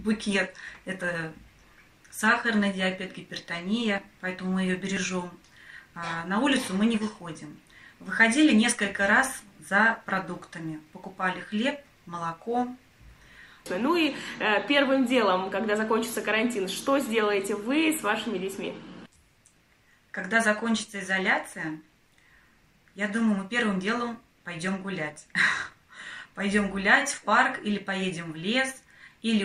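Three brief skips, each a tiny jump where the waveform changes abruptly, occur at about 1.01 s, 4.97 s and 5.96 s. This is an overlap between stream segments. The audio arrives in 1.0-second segments whose time stamps overlap slightly, and the player trims the overlapping stretch as if it were duplicated, though that sound existed only once. A few milliseconds of real audio vanish at each of these segment joins.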